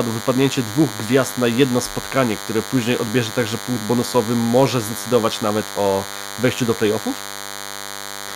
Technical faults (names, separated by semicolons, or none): DECT cordless phone buzz